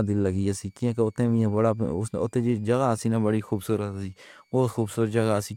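Switching supply whistle runs through the whole of this speech recording: a faint high tone, roughly 45 dB below the speech, wanders between about 2.19 and 2.54 kHz as a switching power supply drops into an audible burst mode or beats against another supply.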